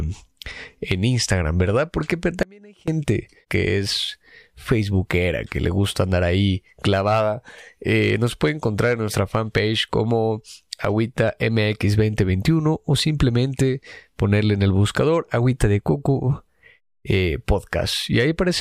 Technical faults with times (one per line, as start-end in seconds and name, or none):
2.43-2.88 audio dropout to a faint residue